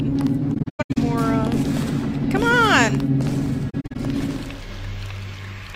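AAC frame loss with muting strikes from 0.54 to 0.97 s and from 3.70 to 3.96 s. Missing frames were replaced with silence. The sound fades out and back in softly. The gaps are scattered, the longest about a tenth of a second.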